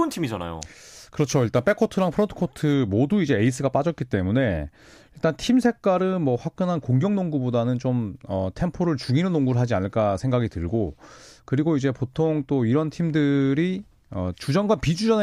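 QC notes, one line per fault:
0.97–2.74 s: crude rate conversion; unfiltered dropped samples, fitting 48 kHz to 44.1 kHz, leave inharmonic fizz about 30 dB down that tracks loud speech, unlike constant hiss.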